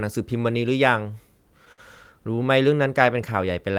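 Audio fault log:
1.72–1.80 s and 2.36–2.39 s, short stall from a late packet: at each point a packet had not arrived when it was needed, so the jitter buffer ran dry and the receiver kept stretching the last bit of sound until the data showed up, then resumed exactly where it left off. Nothing is lost, but a sound is held about 57 ms too long in the first case and about 17 ms in the second, with a faint buzz or dip while it hangs.
2.77–3.78 s, jitter buffer slow-down: the receiver was building its reserve of audio, so it repeated single pitch periods and slivers of pause many times in succession. That inserts about 66 ms over this stretch and runs the speech at roughly 94% speed while the pitch stays the same. The result is drawn-out, slightly sluggish delivery to the end of the clip.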